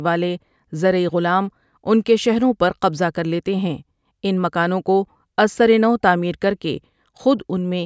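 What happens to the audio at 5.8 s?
Nothing goes wrong at 5.8 s; the speech there carries on intact, with no dropout, click or distortion.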